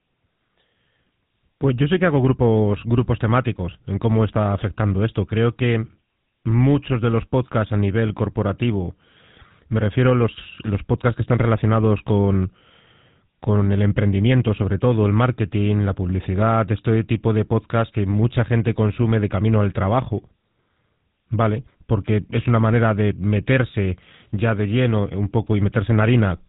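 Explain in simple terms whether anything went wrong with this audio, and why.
Throughout the whole clip the speech sounds buzzy and gravelly, thin like an old mobile call, with nothing above 3.8 kHz. That is the GSM full-rate codec: it rebuilds speech from a simple throat model driven by coarse, evenly spaced pulses, which roughens it.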